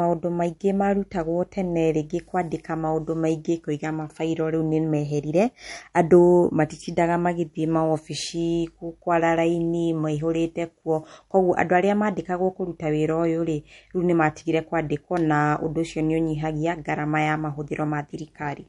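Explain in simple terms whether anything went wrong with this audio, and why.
Yes, something went wrong, and it lasts the whole clip: the speech carries plainly audible damage that sounds like MP3 compression at a low setting, which is the likely cause. The encoder had too few bits to work with, so it threw away everything above about 11.2 kHz and switched quieter parts of the sound on and off from moment to moment. That leaves the speech dull at the top, with a watery, swirly edge and smeared starts to sounds.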